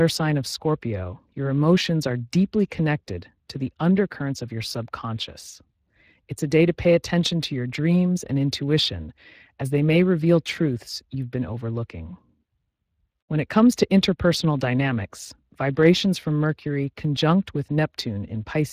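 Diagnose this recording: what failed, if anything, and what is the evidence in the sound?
Speex codec damage throughout the speech, a codec-stage fault: a plainly noisy, hoarse CELP texture that fits a bitrate around 22 kbps, with nothing above 15.2 kHz.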